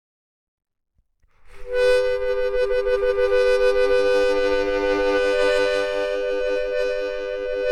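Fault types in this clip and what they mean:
No faults identified in this clip of sounds.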